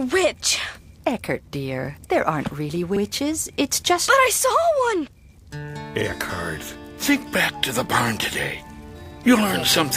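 The audio has overlapping chunks at 2.96, 6.01 and 9.06 s. Each 3.0 s chunk starts 48 ms early, so that slice plays twice as a click or stutter. A dropout would lose audio instead.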